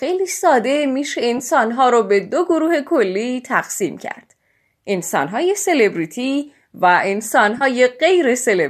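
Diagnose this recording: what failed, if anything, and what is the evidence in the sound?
The failure is at the codec and network stage: AAC frame loss with concealment, three times in the speech, at 1.38–1.41 s, 4.15–4.18 s and 7.58–7.63 s. Each is a brief smeared, noisy, phasey patch lasting about 20 to 30 ms, which fits two or three dropped 10 ms frames of the low-delay AAC stream that is likely carrying the call. The decoder fills each gap from the last good spectrum. On a spectrogram this shows as a thin vertical slice where harmonics blur into noise. The waveform holds its level there but loses its periodic shape.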